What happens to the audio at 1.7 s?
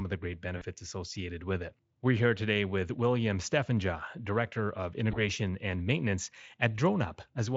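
Nothing goes wrong at 1.7 s: the speech passes through intact there, with the Speex coding leaving no more than faint traces at most.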